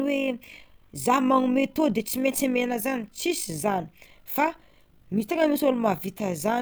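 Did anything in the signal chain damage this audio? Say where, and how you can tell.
Yes. The damage comes from a frame-based processing stage, most plausibly call processing or a codec that resynthesises the signal, which leaves overlap-add ripple across the whole clip. The speech carries a steady, rough flutter, a robotic tremolo near 50 Hz, with the level dipping about 6 dB on each cycle. The frames were windowed and overlapped in a way that doesn't sum to a constant gain, so the level swings once per frame.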